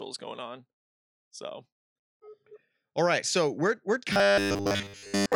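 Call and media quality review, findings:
Robotic sound from repeated short buffers, 4.13 s to clip end at 5.36 s, right after "right so we're we're". Audio likely arriving too seldom; playout repeats a roughly 10 ms slice while most incoming audio is skipped. Result: rigid metallic 100 Hz buzz loosely tracking the speech.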